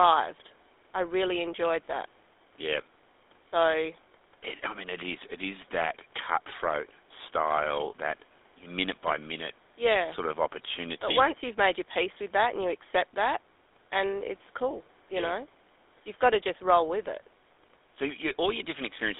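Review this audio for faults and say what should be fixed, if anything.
GSM full-rate codec damage runs through the whole speech clip. The audio is confined to a telephone band of roughly 300 Hz to 3.6 kHz, with nothing above 3.8 kHz, so sibilants and consonant detail are dulled. The codec rebuilds speech from a vocal-tract filter excited by a thinned, regularly spaced pulse train, which gives it a plainly audible buzzy, gravelly roughness that fits the 13 kbps full-rate mode. To prevent it, record or route the speech over a wideband path instead of a GSM voice channel.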